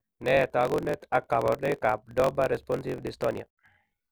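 A speech recording with a block size mismatch, truncated, running for its whole length. A steady buzz near 45.9 Hz sits under the speech. Delivery runs 1.07 times fast at roughly normal pitch. Each block's tail is dropped, which fits a 1024-sample write block.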